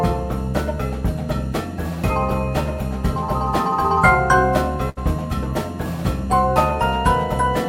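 At about 4.89 to 4.99 s there's a burst of packet loss: several packets in a row never made it in time, so the receiver stretches the last bit of sound for around 72 ms, fading it down, then picks up with roughly 60 ms of audio skipped.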